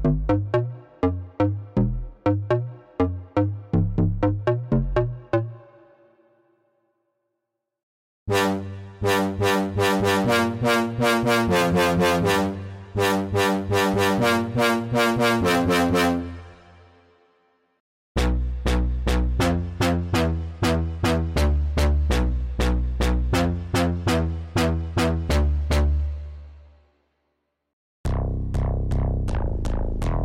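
Nothing in the audio stands out as a technical problem, so there's nothing here to walk through.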